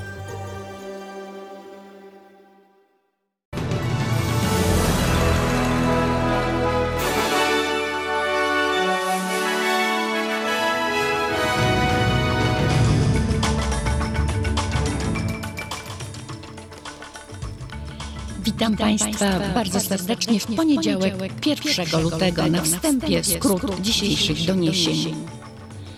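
Throughout, a doubled audio track trails the sound by about a fifth of a second, a few decibels quieter. It's dry and full-band, likely from a second capture path.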